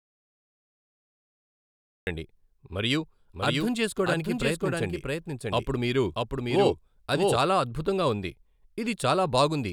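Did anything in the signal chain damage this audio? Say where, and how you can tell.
Yes. The clip opens already in an audio dropout to silence, which runs until 2.07 s. The gap is silent, with no room tone or hiss under it. Then the speech starts abruptly. That points to the capture stage, with the input likely lost through a disconnected device, a failed link or a mute. The recorder kept writing silence until the signal returned. Whatever was said in that stretch is unrecoverable.

From 3.33 s to 7.39 s there is a doubled audio track. A second full-band copy of the speech trails the original by around 0.7 s. It sits about 5 dB lower. It has no reverb tail or room colouring, so it is not an acoustic echo. It starts and stops abruptly, starting just before "అద్భుతంగా ఉంది". The likely cause is a second, slower capture path or an editing or storage step that mixed two misaligned copies.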